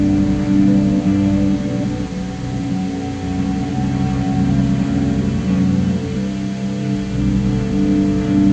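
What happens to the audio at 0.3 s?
Nothing goes wrong at 0.3 s; the audio there is intact, with no dropout, click, distortion or other fault to be heard.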